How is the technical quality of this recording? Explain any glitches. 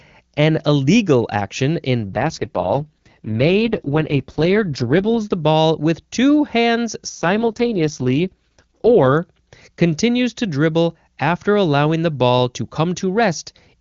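The speech is carried by the AMR wideband (HD Voice) codec and sounds clear at full rate. Two AMR rate drops break that. The first runs from 2.08 to 5.25 s, the second from 7.09 to 9.18 s. A weak radio link makes the network cut the codec's rate and spend bits on error protection. The roughness fits a fall from 23.85 to 6.6 kbit/s. The band stays full and nothing drops out. The speech turns raspy and synthetic, then clears when the rate recovers.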